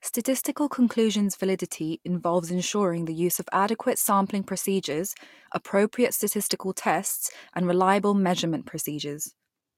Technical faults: none

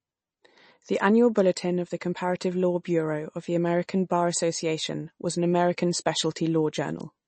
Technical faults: MP3 compression; pre-echo

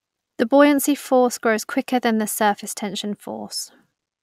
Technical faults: none

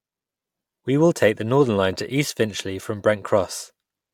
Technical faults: none

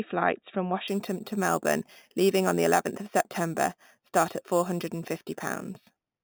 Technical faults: imaging from sample-and-hold upsampling

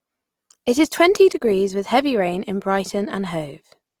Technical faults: Opus compression

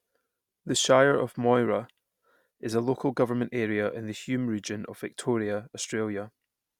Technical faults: none

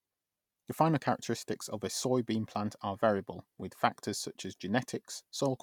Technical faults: none

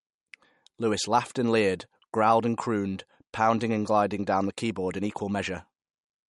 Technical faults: MP3 compression

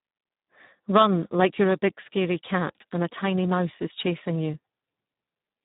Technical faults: Speex codec

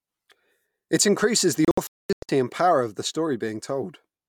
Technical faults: digital broadcast dropout

